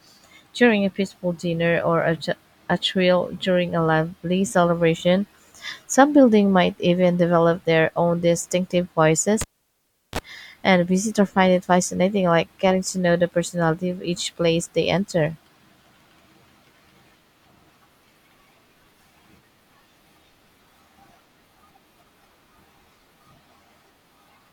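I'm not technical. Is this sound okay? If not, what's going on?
No. Just after "develop their own distinctive", at 9.41 s, a pop cuts the speech to near silence for about 0.7 seconds, then a 31 ms burst of 50 Hz electrical buzz and another pop before "and a visitor find". That's a cable pulled and plugged in while live.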